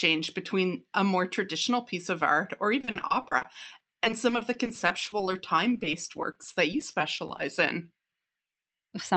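Repeated packet loss (robotic sound) runs from 2.79 to 7.40 s in this speech, right after "piece of art or". Dozens of short dropouts, none longer than 40 ms, are each patched by stretching the preceding sound, so about a fifth of that span turns choppy. The call path's codec caps the whole recording near 8 kHz.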